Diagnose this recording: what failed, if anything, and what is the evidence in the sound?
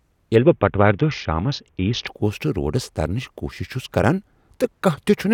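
Codec stage: a Bluetooth SBC bit pool drop from 0.36 to 2.07 s dulls the speech's treble and adds gritty noise, fitting a starved, roughly 60 kbps link. Unlike a plain low-pass, the coarse grit appears too, then clears.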